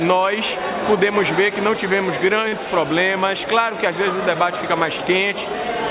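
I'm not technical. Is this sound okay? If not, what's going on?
No, there's one small hiccup. From 2.48 to 2.54 s there's a short stall from a late packet. A chunk of audio arrived late, so the receiver held the last bit of sound for about 37 ms until it caught up. Nothing's lost; that moment just drags briefly, and everything after it lands that much later. The narrow, phone-call tone throughout, with nothing above 4 kHz, comes from the call codec.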